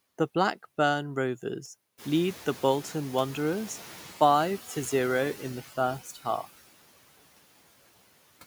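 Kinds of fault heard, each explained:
Noise suppressor artifacts: A per-band noise suppressor pulls steady background down by about 17 dB, so the noise drops away in gaps and swells back under speech. A spectrogram shows mottled, patchy noise texture and pumping floor between syllables.
Noise suppressor catching up: When the room noise jumps about 16 dB near 2 s, the suppressor's estimate lags, letting the louder noise through with only about 6 dB of reduction from 1.97 to 4.09 s before it settles. The waveform floor visibly steps up, then slowly sinks.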